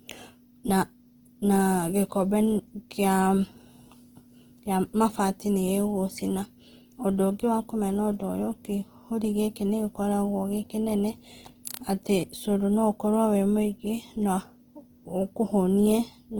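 Opus compression runs through the whole speech clip, likely from its music (CELT) mode at a rate that fits about 16 kbps. Band energies are kept, but starved bands get filled with folded or noise content, so the voice turns plainly grainy and rough while still reaching 20.2 kHz.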